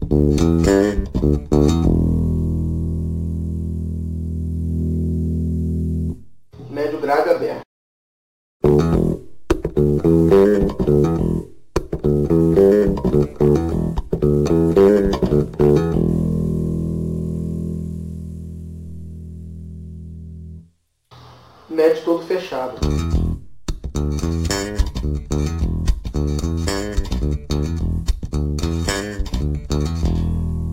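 Sample clock jitter runs throughout: an unstable converter clock of a few microseconds leaves hiss-like roughness roughly 35 dB down, rising on loud, bright passages.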